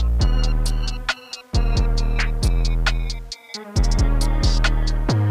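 The audio likely suffered low bit depth without dither, consistent with rounding to 8 bits, so grainy distortion around 40 dB down follows the sound throughout.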